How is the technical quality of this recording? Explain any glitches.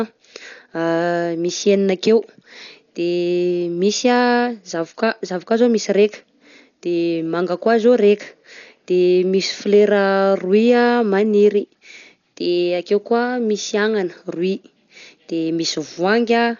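The technical quality is poor: heavy lossy coding damage runs through the whole recording. From start to finish the speech is likely affected by Dolby Digital compression, at a rate consistent with about 48 kbps. Nothing is left above 6.9 kHz, so the sound is dull and boxed-in. The encoder had too few bits, so many frequency lines carry no real detail and the decoder fills them with noise, leaving a rough, fluttering grain clinging to voiced sounds. A plain low-pass filter would only dull the sound. The added noise texture is what marks a starved codec.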